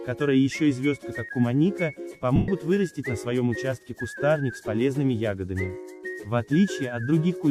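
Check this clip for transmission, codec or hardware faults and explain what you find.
One fault stands out. At 2.36 to 2.48 s, lost LE Audio frames leave a 120 ms gap. The decoder repeats the last spectrum with scrambled signs, so tones smear into noise and fade.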